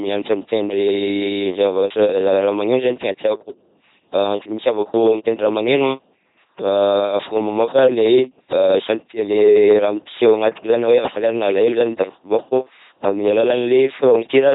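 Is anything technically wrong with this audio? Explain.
Yes. Two faults are present.

The first is LPC-10 vocoder damage, heard for the whole clip. The speech is rebuilt by a small all-pole filter, excited by either a pulse train or noise. Each moment is forced to be fully voiced or fully unvoiced. The result is a buzzing, mechanical robot voice, with stray buzz or hiss where that choice goes wrong. The damage is heavy, and nothing survives above 3.8 kHz. The sound fits a 2.4 kbit/s coder.

The second is periodic USB or driver dropouts, running from 0.07 s to 14.48 s. Something blocks the audio driver or USB bus at a fixed interval. Each time, a tiny slice of audio, about half a millisecond, is skipped outright rather than filled. This repeats every 63.5 ms, roughly sixteen times per second, about two hundred times in all. It is heard as an even train of ticks laid over the speech.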